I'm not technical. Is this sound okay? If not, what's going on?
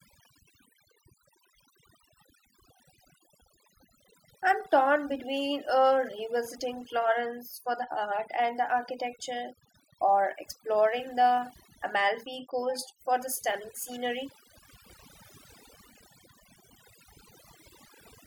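No. All through the recording, the gaps between phrases drop to near silence sprinkled with tiny twinkling specks. That is overdone noise removal: a cleanup tool aimed at background noise was turned up too far, so it switched off any slice of the sound it mistook for noise, taking quieter parts of the voice along with the noise.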